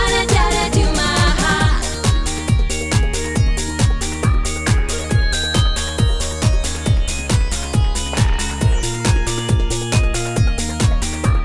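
Nothing stood out on listening; no technical faults could be heard at any point in the audio.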